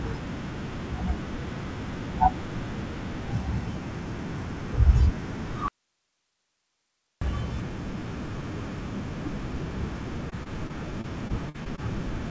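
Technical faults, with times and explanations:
5.68 to 7.22 s, audio dropout to a faint residue. The speech cuts out abruptly for about 1.5 s and comes back just as suddenly. The gap is not silent. It holds only a low hiss, about 50 dB under the speech. That means the path stayed live while the wanted signal was lost, likely through a break upstream of the input. A natural pause or fade would not stop this sharply.
10.30 to 11.80 s, repeated packet loss (robotic sound). Eight short holes fall within this 1.5 s stretch, none longer than 50 ms. Each one is patched by stretching the last bit of sound, so the speech turns choppy. About 12 percent of the stretch is concealed in this way, roughly 175 ms in total. The band-limited sound of the call codec, with nothing above 8 kHz, runs through it.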